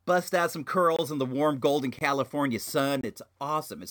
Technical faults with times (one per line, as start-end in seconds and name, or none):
0.96-0.99 gap between chunks
1.99-2.01 gap between chunks
3.01-3.03 gap between chunks